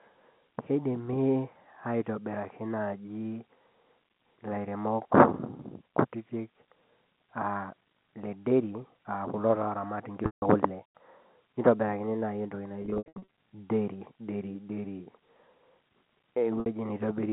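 At 10.26 s, packet loss with pitch repetition holds the sound for 160 ms, then fades. From 12.82 to 13.27 s, scattered gaps stutter and buzz, up to 80 ms each. At 16.60 s, a 60 ms gap gives a brief held buzz. The receiver loops the last pitch period to fill each gap.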